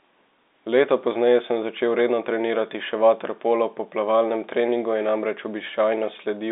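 Nothing goes wrong anywhere in this speech recording, which simply carries the narrow telephone band of roughly 250 Hz to 3.7 kHz that comes with G.711 telephone coding.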